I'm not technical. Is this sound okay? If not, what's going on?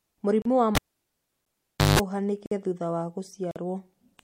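No. There are two problems in this speech.

Gaps between stream segments occur at 0.42 s (about 33 ms), 1.45 s (about 11 ms), 2.46 s (about 53 ms, just before "thutha wa") and 3.51 s (about 45 ms, just after "thutha wa"). The audio arrives in one-second pieces, and their timing doesn't quite line up. The player fills each mismatch with silence, so you hear a sharp little hole about once a second. Nothing is actually cut out.

A cable pulled and plugged in runs from 0.75 s to 1.99 s. It begins with a pop as the connection breaks, and then the sound drops to near silence for about 1.2 seconds. As the plug goes back in, only its tip touches at first, which lets in a short burst of 50 Hz mains hum lasting about 0.17 seconds. A second pop follows when the sound comes back.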